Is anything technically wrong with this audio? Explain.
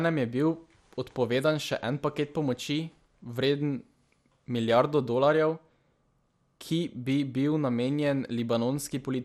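Yes. Throughout, the speech sounds dull and gurgly, with granular, flickering highs, likely from MP2 compression at a bitrate near 80 kbps starving and switching off upper sub-bands.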